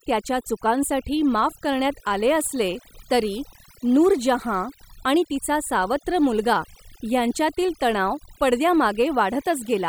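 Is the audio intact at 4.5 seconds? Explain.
No. At 4.5 seconds, as throughout the clip, the background has dropped and broken up into twinkling, warbling specks. This is overdone noise removal: a noise reduction process set too aggressively pushed individual frequency bands down or out whenever they came close to its noise estimate. The noise went, but quieter parts of the voice were stripped along with it, leaving those fluttering remnants.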